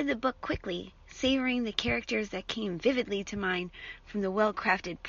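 Nothing goes wrong anywhere in this speech recording, and the faint room noise in the background sits about 55 dB below the speech, just as it should.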